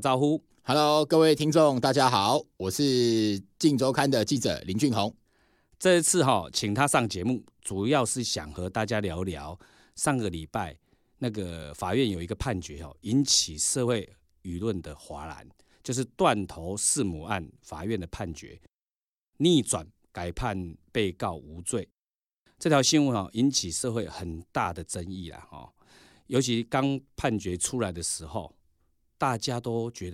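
No technical faults are audible anywhere in the recording.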